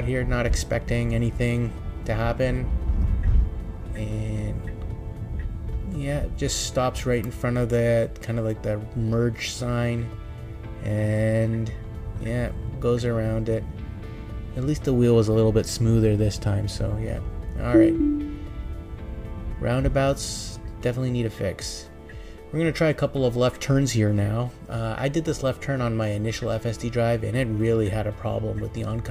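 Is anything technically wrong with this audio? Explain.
No, nothing technically wrong turns up in this audio on listening; no faults are audible.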